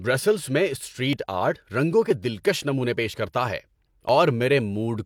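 Speech with three tiny skips: at 1.13 to 1.17 s before "آرٹ رنگوں", 2.11 to 2.13 s between "آرٹ رنگوں" and "دلکش نمونے", and 4.09 to 4.11 s after "کرتا ہے". This is overlap between stream segments: one-second segments overlap, and trimming the overlap jumps the waveform.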